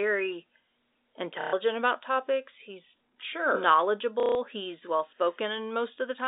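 At 1.41 s, for 0.12 s, the speech freezes into a short robotic stutter just before "about topics he's sure". This is packet loss with the last packet repeated. Audio went missing, and the receiver replayed its last piece until fresh audio arrived. The run buzzes at about 33 Hz, which fits 30 ms packets. The same fault returns at 4.2 s for 0.15 s, before "he's well". Both sit on a telephone-band G.711 line.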